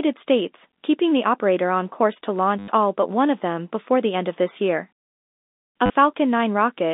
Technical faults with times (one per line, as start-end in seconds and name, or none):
2.59-2.68 packet loss with last packet repeated
5.86-5.90 packet loss with last packet repeated